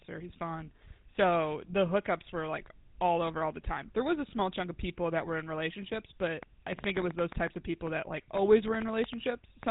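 Throughout, the GSM full-rate codec is plainly audible. Nothing passes above 3.8 kHz, and pulse-driven resynthesis makes the speech buzzy and gravelly, which fits 13 kbps.

From 6.43 to 9.64 s, a train of clicks ticks over the speech. About twenty pops, irregularly spaced at 5.6 per second, peak about 10 dB above it, likely from interference.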